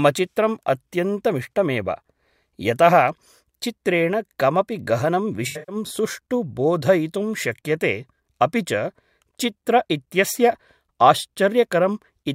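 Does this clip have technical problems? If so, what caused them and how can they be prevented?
Yes. AAC frame loss with concealment occurs from 5.47 to 5.76 s, just after "चित्रेण कमपि गहनं": about 192 ms of frames drop out over 213 ms, with the longest gap around a tenth of a second. The decoder patches each gap from the last good spectrum, which produces a brief smeared, phasey patch. Adding forward error correction or retransmission on the transport would prevent it.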